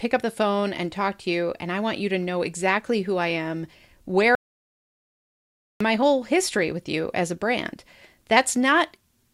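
An audio dropout to silence runs from 4.35 to 5.81 s: the speech cuts off mid-flow and about 1.45 s of dead silence follows, with no room tone, before it resumes abruptly. The likely cause is a lost input while recording continued writing zeros.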